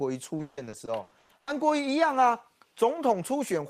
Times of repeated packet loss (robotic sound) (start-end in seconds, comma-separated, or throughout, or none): 0.37-1.49